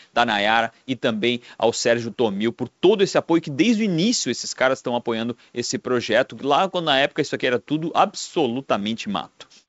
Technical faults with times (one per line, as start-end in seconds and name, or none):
none